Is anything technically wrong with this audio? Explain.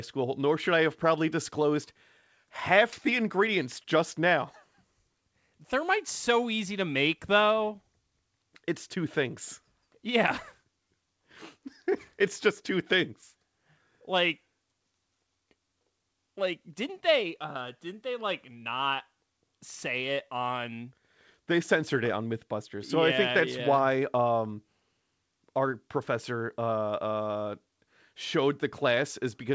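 No, nothing is technically wrong with this speech. It has been through a call's microphone processing and a wideband call codec, likely G.722, so nothing is heard above about 8 kHz, which is normal for that path.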